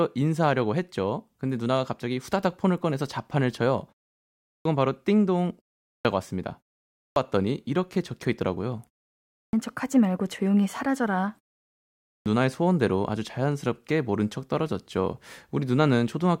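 You get a clipped start after a pause five times: at 4.49 s, 5.88 s, 6.99 s, 9.36 s and 12.1 s, each after a gap of 0.35 to 0.78 s. The output seems to doze off during the silence and takes roughly 160 to 170 ms to wake, so each phrase's opening is chopped and the speech snaps in abruptly. The pauses themselves just go quiet.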